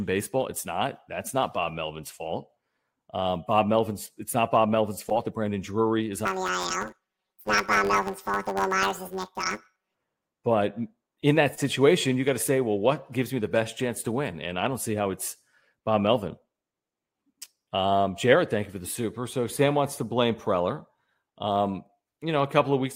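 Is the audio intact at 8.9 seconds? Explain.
No. At 8.9 seconds the speech sits inside a stretch of planar audio read as interleaved, running from about 6.26 to 9.95 s. Each block stores all left samples and then all right samples, but playback treats them as alternating left-right pairs, so each block plays twice at double speed. The blocks here are short, about 10.7 ms, which fits a 512-sample block. The result is a robotic buzz at roughly 94 Hz with no clear octave shift.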